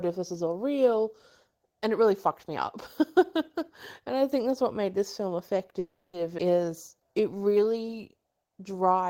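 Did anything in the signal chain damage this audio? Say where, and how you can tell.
Yes. From 5.79 to 6.15 s the speech stops moving forward. The last sound is held and smeared for about 340 ms, fading into roughly 40 ms of silence before the talker resumes exactly where they left off, with nothing lost. That pattern is a call audio freeze, likely from packets held up on the network so the receiver's jitter buffer ran dry and it extended the last frame. A dropout would leave a clean gap instead of a decaying continuation.

At 6.37 to 6.40 s there is a skip ahead. Playback jumps forward over about a tenth of a second of speech, and the two sides are butted together with only about 10 ms of fill. This happens when a stretch is dropped on the way, or discarded by an overflowing jitter buffer, while later audio is already waiting, which pulls the delay back down. Unlike the freeze, no time is added here. 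Material is simply missing, and you hear an abrupt splice rather than a held sound.

From 6.65 to 7.65 s there is a jitter buffer slow-down. The speech runs at about 89% speed with its pitch unchanged, stretched by about 123 ms in total, and vowels sound drawn out. The buffer was rebuilding its reserve by repeating single pitch periods many times in a row. That is what separates it from a simple playback-rate error, which would lower the pitch along with the tempo.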